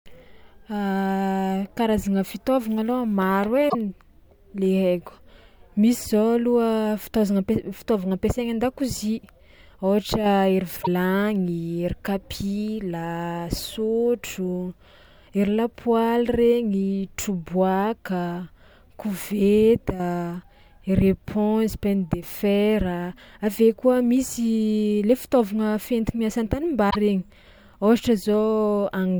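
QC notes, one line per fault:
3.66–3.75 s, 10.79–10.88 s and 26.87–26.96 s: damaged data in a compressed stream. Each event is a brief, roughly 90 ms disturbance. Corrupted bytes in the encoded stream cause the decoder to misread or refuse the affected frames until it regains sync at the next valid frame header. Normal decoding then resumes, so each disturbance is short and self-contained.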